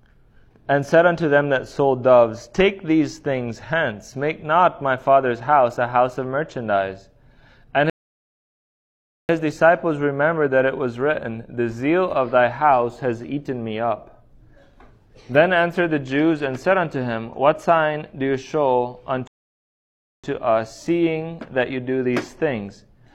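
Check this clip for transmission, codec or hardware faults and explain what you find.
Two rebuffering stalls interrupt the audio. The first runs from 7.90 to 9.29 s and adds 1.39 s. The second runs from 19.27 to 20.24 s and adds 0.96 s. In each, the player exhausted its downloaded audio and halted until more data arrived. The sound drops to silence, then picks up exactly where it stopped. Nothing is skipped or repeated. The gaps only stretch the timeline.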